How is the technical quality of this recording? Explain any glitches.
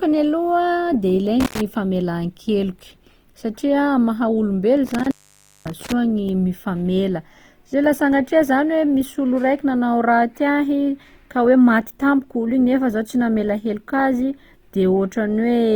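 The recording has two technical problems: coding damage across the whole clip and two brief dropouts from a bad connection.

Throughout, the speech sounds grainy and rough, with tonal parts turned noisy and no obvious swirling. The likely cause is Opus compression in its music mode at a low bitrate around 24 kbps. The encoder keeps each band's energy but fills starved bands with folded or noise-like content. A spectrogram shows smeared, speckled texture within bands and content still reaching about 20.2 kHz.

Between 1.40 and 1.61 s, and again between 4.87 and 5.92 s, there is an intermittent contact fault. A loose plug or cable briefly opens the signal path, for about 90 ms and then about 550 ms. You hear crackle at the edges and faint hiss in between. The waveform collapses to near-flat, with spiky clicks at each boundary.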